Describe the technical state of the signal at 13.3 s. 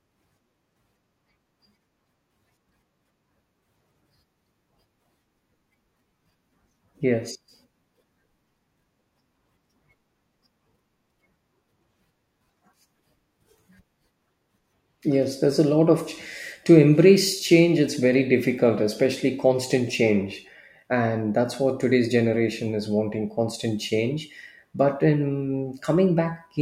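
At 13.3 s the signal is intact, with no audible fault at that moment.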